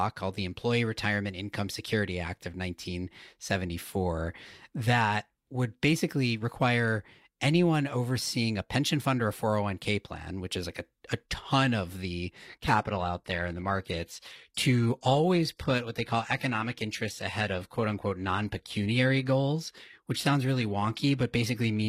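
At 12.64 s, right after "a ton of the", the adaptive stream switches to a lower bitrate for the rest of the clip. The change is sudden, with no gap. The speech turns thin, with nothing above 14.9 kHz, which fits a low-rate HE-AAC stream.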